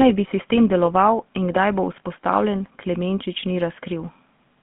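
Throughout, the speech has a buzzy, gravelly roughness and a narrow band between roughly 150 Hz and 3.4 kHz. This is the GSM full-rate codec, which fits its 13 kbps mode: a vocal-tract model driven by coarse, regularly spaced pulses that smear fine voice detail.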